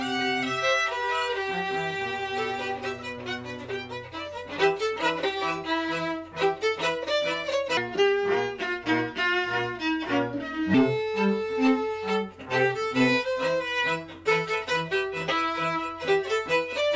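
Between 7.77 and 10.74 s the audio drops into a wrong sample rate fault: everything runs at about 0.73 times speed and sits roughly 5.5 semitones lower, so the sound turns slow and heavy. That ratio fits 22 kHz material being played back at 16 kHz with no conversion. On a spectrogram the stretch squeezes every harmonic and the upper band edge downward in frequency, while the waveform's features spread out in time.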